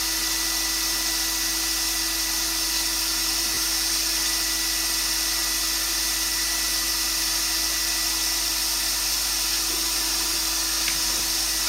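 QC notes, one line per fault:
3.54 to 3.57 s, lost LE Audio frames: about 30 ms of sound, consistent with three 10 ms frames, is replaced by the last good spectrum replayed with scrambled phase, so tonal content smears into a brief noisy hiss. On a spectrogram, the harmonic lines blur into a diffuse block. The waveform shows irregular noise-like cycles.
11.19 s, lost LE Audio frames: a single 10 ms frame is concealed the same way. It is a short grainy blip, seen as a thin vertical smudge.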